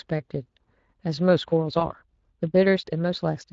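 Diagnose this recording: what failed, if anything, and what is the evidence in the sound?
The codec stage is the first problem. Throughout the clip the speech sounds hoarse and grainy, with a noisy edge. That's plainly audible Speex codec damage, and the amount of it points to a fairly low-rate Speex stream, somewhere around 20 kbps, where the excitation just doesn't get enough bits.

At 1.31 s the pace suddenly jumps to about 1.35 times normal speed and stays there to the end, but the pitch doesn't rise. It sounds rushed. That's a time-stretched section, likely from software squeezing the audio to fit a length by dropping short pieces.

From 1.79 to 1.88 s there's a brief smear that fades, and the sound stays weak for a moment afterwards. That's VoIP packet loss concealed by the speech codec. It fits one lost 20 ms frame that the decoder filled by extrapolating from the previous frame at falling gain, and it then took a few tens of milliseconds to recover.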